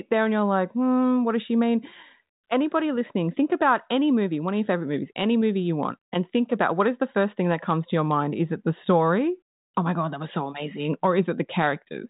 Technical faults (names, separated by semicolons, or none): none